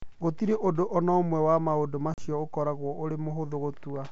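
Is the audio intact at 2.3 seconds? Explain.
No. Packet loss on this ADPCM call dropped about 40 ms, roughly two packets, from 2.14 to 2.28 s, leaving the decoder's predictor and step size out of step with the sender's. Just after that hard-edged silent gap, at 2.3 s, speech resumes slightly distorted before resettling.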